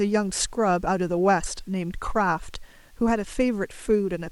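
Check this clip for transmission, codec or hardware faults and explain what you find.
Checking this clip turns up no faults to explain.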